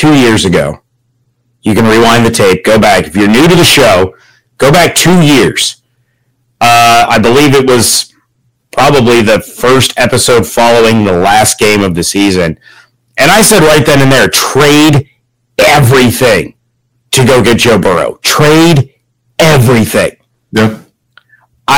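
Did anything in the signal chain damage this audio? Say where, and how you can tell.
Yes. Hard clipping runs through the whole speech clip, from the first second to the last, and it points to a gain stage driving a converter or sample-format conversion about 22 dB past full scale. Nearly a third of the samples sit pinned at the limit, so every loud syllable is sliced flat and carries a harsh, buzzy fuzz. Soft saturation would round those peaks more gently, and codec damage would smear or warble rather than add this constant hard edge.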